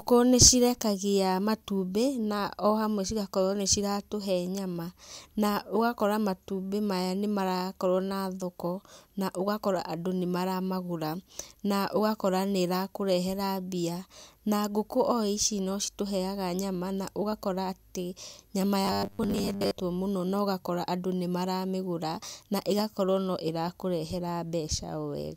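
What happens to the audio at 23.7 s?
At 23.7 s the speech carries on intact, with no dropout, click, distortion or other fault at that moment.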